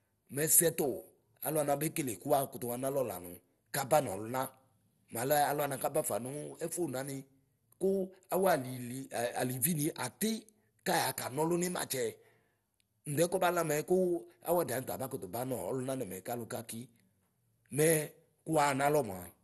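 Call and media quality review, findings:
Dull, band-limited speech throughout, nothing above about 12.2 kHz. Gurgling, granular distortion, plainly audible across the whole clip. Upper bands flicker in and out. Likely MP2 compression. The sound points to a rate near 64 kbps. Too few bits per sub-band. Top bands switched off, remaining bands coarsely quantised.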